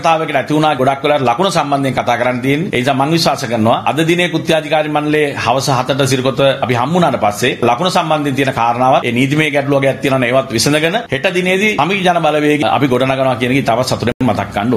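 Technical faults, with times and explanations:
Throughout: gain pumping. The gain swings by around 10 dB. Loud and soft passages sit unnaturally close in level, and the whole sound feels squashed. The likely cause is gain set far too high, with a fast limiter or compressor clamping down on each peak.
14.12 to 14.21 s: Bluetooth stall. The sound drops to silence for about 89 ms, then resumes. This is likely radio interference delaying packets, so the headphones' buffer ran empty and playback paused until the resent data arrived and could play again.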